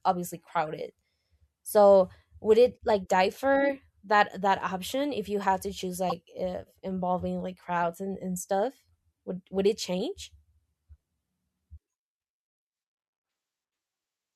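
A corrupt frame decoded at 0.67 s gives a faint, brief blip. Another at 6.10 to 6.12 s, after "you had to choose" and before "if involving like crowds", is a much louder chirp. Each time, one damaged frame was played with misread data, scattering energy wrongly.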